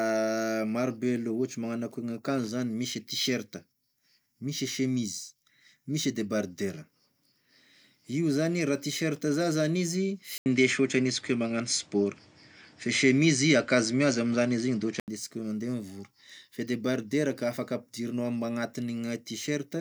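At 10.38 s the speech drops out for 80 ms and returns duller, with nothing above 9.7 kHz. A new background noise appears about 30 dB below the speech, and the level shifts by about 5 dB. The likely cause is an input switched to a poorer device. It recovers at 15.08 s.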